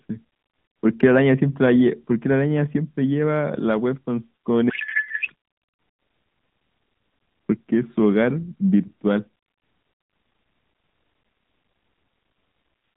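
Speech carried over an AMR narrowband mobile codec, band-limited to roughly 150 Hz to 3.7 kHz with light codec colouring, breaks down from 4.70 to 5.34 s into a codec payload misread. For those 0.64 s the voice is replaced by garbled, warbling noise that barely tracks the speech, consistent with octet-aligned AMR frames being unpacked as bandwidth-efficient. On a spectrogram the formant structure dissolves into smeared, patternless energy below 4 kHz, and the waveform envelope jumps out of step with the surrounding speech.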